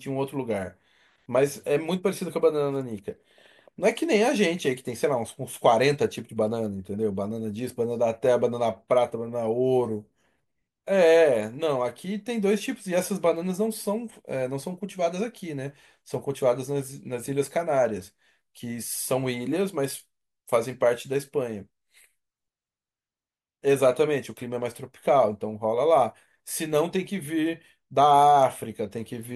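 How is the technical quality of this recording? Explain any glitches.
No glitches or technical faults can be heard here.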